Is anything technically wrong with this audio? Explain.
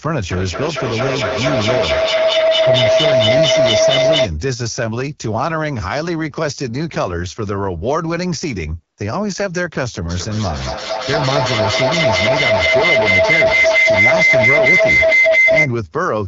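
Yes. Two kinds of fault are present in this speech.

Throughout, the AMR wideband (HD Voice) codec at about 8.85 kbit/s, one of its lowest rates, models the voice with sparse pulses, leaving it rough and raspy. Content stops near 7.5 kHz; above 6.4 kHz a spectrogram shows smooth, structureless noise fill.

Feedback howl appears from 0.32 to 4.38 s and again from 10.1 to 15.79 s. A shared room's microphone-to-loudspeaker loop gains level each pass, so repeats grow into a tone near 700 Hz, then near 2 kHz, pulsing roughly every 200 ms and peaking about 6 and 8 dB above the speech. On a spectrogram it shows as a bright horizontal line; the waveform swells in regular pulses.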